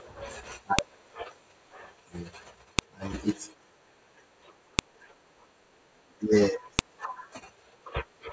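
At 0.79, 2.79, 4.79 and 6.79 s the speech is broken by a sharp, loud click, a file header played as audio. The clicks arrive every 2.0 s, so the stream was assembled from 2-second WAV pieces whose header bytes were never stripped and are decoded as samples. Each snap lands regardless of the speech. On a waveform it is a tall, near-instant spike; on a spectrogram, a thin vertical line spanning all frequencies.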